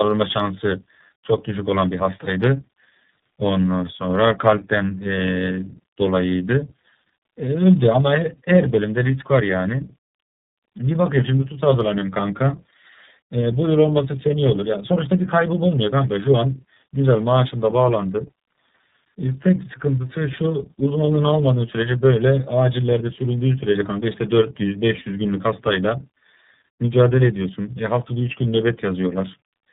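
Throughout, tandem speech coding: two low-rate speech coders in series, pointing to G.729A then iLBC, compound roughness and warble beyond one codec's, with nothing above 3.8 kHz.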